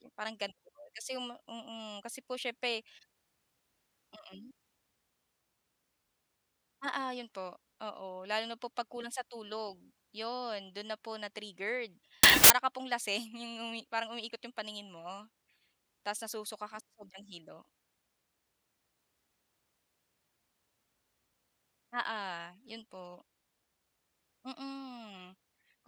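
At 12.23 to 12.50 s, before "ka pong lasing", samples built from the wrong bytes promote the low bits, giving loud, harsh broadband noise, unlike clipping.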